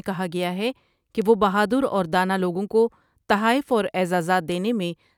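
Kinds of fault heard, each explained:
Bit error spike: A flipped bit in a sample makes the value leap by a power of two and snap straight back, so you get a bare tick with no link to the speech. Three land here at 0.43, 1.22 and 4.52 s, all at about -21 dBFS. The first sits just before "ہے کہ وہ 'بہادر" and the second falls between "ہے کہ" and "وہ 'بہادر اور دانا". The first is a single-sample click, and the later two sound like a few corrupted samples in a row.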